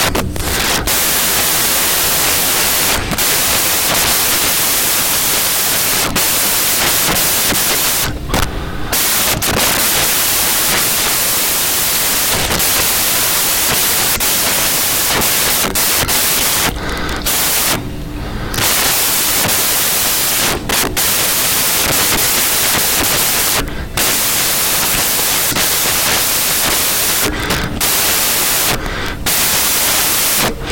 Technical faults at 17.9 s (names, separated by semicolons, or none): samples built from the wrong bytes